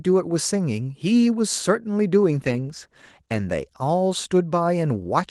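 From 2.39 to 4.47 s, a call bitrate drop sounds like the encoder's budget falling from about 32 kbps to around 13 kbps, bottoming out for roughly a second. With fewer bits, the speech is coded more coarsely, turning rough and watery and losing its upper frequencies until the rate recovers.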